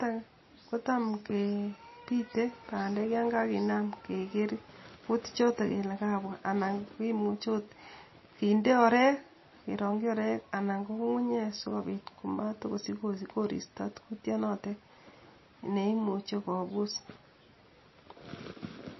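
Throughout, the speech sounds watery and swirly, with s sounds turning into metallic chirps and nothing above 5.8 kHz. The likely cause is heavy MP3 compression, consistent with about 24 kbps: short of bits, the encoder discards treble and lets weak frequency lines flicker between frames.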